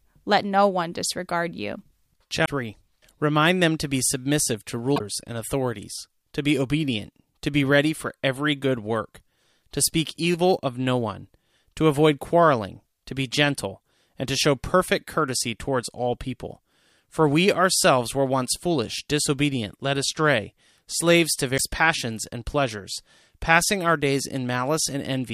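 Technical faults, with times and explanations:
2.42–2.49 s, 4.93–5.01 s and 21.54–21.61 s, damaged data in a compressed stream: each is a brief glitch of about 70 to 80 ms that cuts across the speech. Part of the encoded stream is corrupt at those points, so the decoder misreads the frames there, loses its place, and hunts for the next valid frame header before normal speech resumes. The garbled frames come out as that short glitch.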